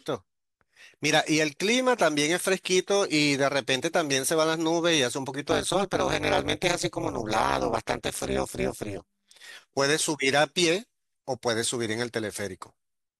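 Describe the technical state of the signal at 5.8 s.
At 5.8 s the speech carries overlap-add ripple, running from 5.51 to 9.32 s. Frames are rejoined with an overlap that does not sum to constant gain. The level dips by about 60 dB once per frame, around 200 times a second, giving a metallic buzz with extra tones around each note.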